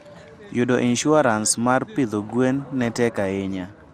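Speech, with generation loss throughout, likely from repeated lossy re-encoding, about five passes through what sounds like MP2 near 96 kbit/s. The result is swirly, hollow and smeared, with blurred attacks and nothing above 15.3 kHz.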